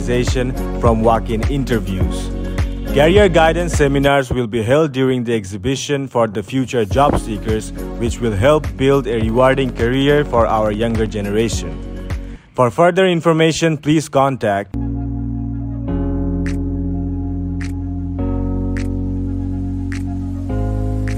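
From 9.13 s to 11.07 s a train of clicks runs over the audio: around thirty near-identical pulses at a steady 12.4 per second, peaking at roughly the level of the sound itself. The source is likely electrical interference or a faulty connection or power supply injecting the same pulse again and again. The even spacing and matching shape set it apart from random crackle, and because the clicks sit on top of the sound rather than cutting gaps into it, they are not dropouts.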